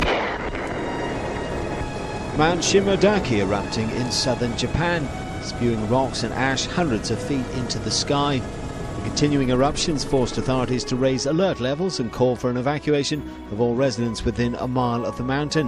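Listening through the recording, nothing stood out as a technical problem at any point.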